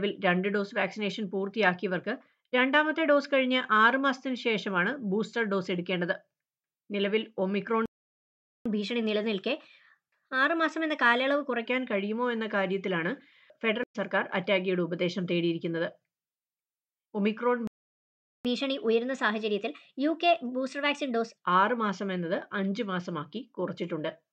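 At 7.86 s the sound cuts out in a playback stall and stays silent until 8.66 s, about 0.80 s, then carries on from where it stopped. The same thing happens from 17.67 s to 18.45 s, about 0.77 s. Both gaps are likely the player running out of buffered data or its thread being blocked. Nothing is skipped across either gap, which is what separates a stall from a dropout that loses material.

Each stall is followed by catch-up at higher speed. From 8.66 s to 11.66 s the audio runs at 1.1 times normal speed, with pitch raised by about a semitone and a half. From 18.45 s to 21.45 s it runs at 1.15 times, about two semitones up. Here the player is resampling its backlog to win back the lost time, so speed and pitch rise together and then fall back. A pitch-shift fault would leave the timing unchanged, and time-stretching would leave the pitch alone.

A stream reconnect comes at 13.84 s: 80 ms of silence, then the audio resumes at 13.96 s a fraction later than where it left off. 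The connection dropped, and a fresh decoder restarted mid-stream. Unlike the stalls, this gap is short and the material jumps forward slightly rather than continuing seamlessly, and no speed-up follows it.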